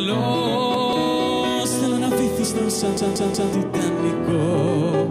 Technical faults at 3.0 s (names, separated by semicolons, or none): repeated buffer